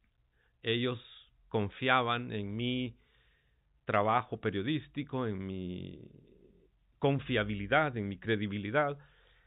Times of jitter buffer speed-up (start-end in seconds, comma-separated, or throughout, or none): none